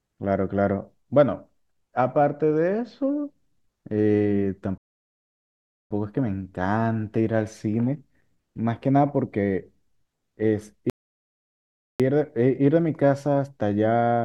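Speech, interrupted twice by a rebuffering stall: at 4.78 s the audio drops to silence until 5.91 s, and again from 10.90 s to 12.00 s, each time resuming exactly where it stopped. The player ran dry of downloaded data and waited for more, so nothing is skipped but about 1.13 s and 1.10 s are added. On a waveform these appear as flat silent gaps; on a spectrogram, as fully blank vertical bands.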